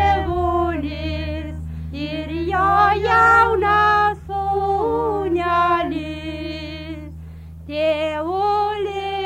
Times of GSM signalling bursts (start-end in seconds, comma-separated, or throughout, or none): none